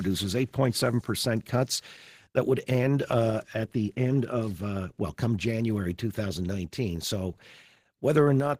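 At 8.40 s the speech and background drop together by about 5 dB in a single step, a microphone volume step-down, likely from the call software lowering the input gain.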